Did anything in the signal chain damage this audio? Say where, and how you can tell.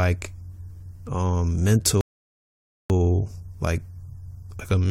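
Yes: the speech drops to silence at 2.01 s and resumes at 2.90 s with nothing missing, a rebuffering stall at playback adding 0.89 s while the player waited for data.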